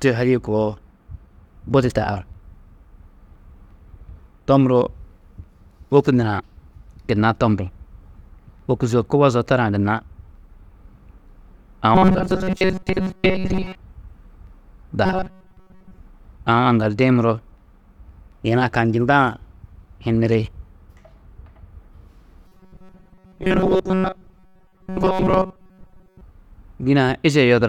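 From 11.95 to 13.75 s, 15.06 to 15.98 s and 22.48 to 26.22 s, the speech turns into a metallic 188 Hz buzz: robotic sound, likely from repeated short buffers of about 5.3 ms standing in for most real audio. Spectrograms show rigid harmonic stripes, waveforms a repeating cycle.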